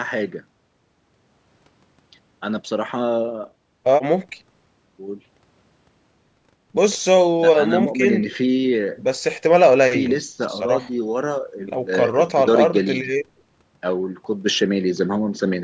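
A speech recording with no technical faults to report. It has passed through a call's microphone processing, which trims the lowest bass and leaves nothing above 8 kHz.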